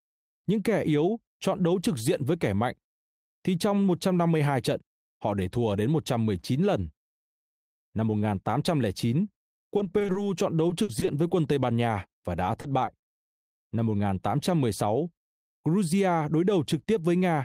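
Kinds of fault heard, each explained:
Repeated packet loss (robotic sound): packets kept going missing, and each brief hole was filled by stretching the preceding sound, so three short stretches of the speech turn choppy and robotic.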